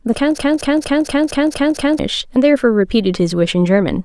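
From 0.38 s to 1.99 s the speech locks into a broken-record loop: a fragment of about 232 ms plays seven times back to back, each pass identical, before the audio moves on. The likely cause is a stalled player or stream that kept re-sending its last buffered piece, so whatever should have been heard in that stretch is lost. Unlike an echo, the copies neither fade nor overlap, and unlike a dropout there is no silence between them.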